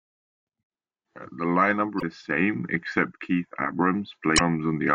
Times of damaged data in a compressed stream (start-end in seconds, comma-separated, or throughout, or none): 1.97-2.03, 4.35-4.41